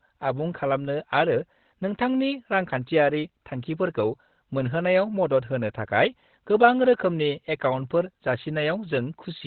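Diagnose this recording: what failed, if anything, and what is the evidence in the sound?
The codec stage failed: throughout the speech the sound is muffled and hoarse, with nothing above 4.3 kHz. This points to likely Opus compression in its SILK speech mode at a low bitrate, around 12 kbps. A spectrogram would show a flat ceiling at 4.3 kHz across the clip.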